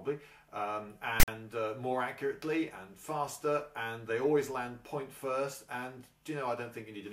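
At 1.2 s, file tags were played as audio: text metadata and its zero padding decoded as samples, giving a one-sided rasp, then a silent gap, ending abruptly at 1.28 s.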